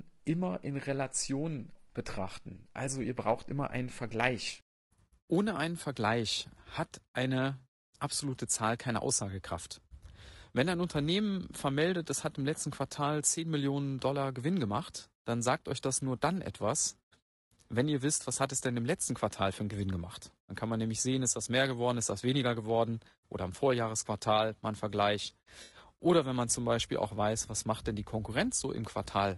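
The encoder behind the whole recording is likely low-delay AAC compression of the AAC-ELD kind used for video calls, running at a bitrate that sounds close to 32 kbps. Its short analysis frames cannot separate the speech harmonics cleanly, and the bits run short. The damage is plainly audible throughout: the voice sounds rough and grainy, noise fills the gaps between harmonics, and the top band has a thin, synthetic quality.

At 1.91 s, AAC frame loss with concealment briefly takes over. About 40 ms of coded audio went missing, which fits two lost frames, and the decoder patched the gap by reusing the last good spectrum. The result is a short smeared, noisy blip ending by 1.97 s. The same fault returns at 25.63 s with a longer gap of about 80 ms, which suggests four frames. The concealed patch runs to 25.77 s and is likewise smeared.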